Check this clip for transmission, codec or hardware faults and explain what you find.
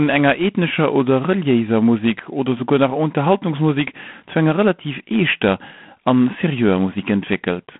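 One codec fault runs through the whole clip: G.726 ADPCM coding at a low rate. Throughout the speech, each sample carries only a few bits of difference from an adaptive prediction, a coarseness that fits 24 kbit/s, so quantisation noise rides on the signal as a harsh, rasping hiss that swells and fades with the speech level. The line band spans 150 Hz to 3.5 kHz, with nothing above 3.8 kHz.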